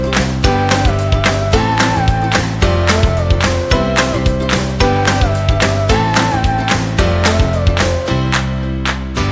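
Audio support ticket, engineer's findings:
Listened through; nothing stood out.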